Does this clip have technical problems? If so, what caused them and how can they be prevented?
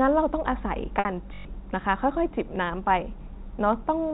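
Yes, there are two.

First, packet loss with pitch repetition at 0.99 to 1.05 s. About 60 ms of audio went missing, which fits two dropped packets. The receiver covered the gap by repeating the last pitch period, so you hear a brief held, slightly buzzy tone instead of a hole. That's the concealment working as designed. A jitter buffer with some headroom, or forward error correction, on the network path would keep those packets from going missing in the first place.

Second, a system hang loop from 1.34 to 1.45 s. The machine or its audio driver stalled while the sound hardware kept cycling through the same ring buffer. A 21.33 ms slice repeats exactly about five times, giving a short buzz at roughly 47 Hz. That loop length fits a 1024-sample buffer. Around a tenth of a second of real audio never made it out. Running the audio thread at high priority and keeping drivers current would help prevent those stalls.

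The G.711 A-law telephone band-limiting sounds just as expected for that format.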